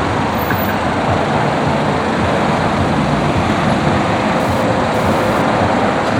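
From 4.40 to 5.42 s a hard, raspy buzz cuts in over the everyday sound, pitched at about 217 Hz with a dense stack of harmonics and sitting about 22 dB below it. This is GSM phone buzz. A nearby 2G handset was sending data in short radio bursts, about 217 per second, and the audio circuitry rectified those pulses into an audible tone. The buzz appears and then stops because the transfer came in a brief spell.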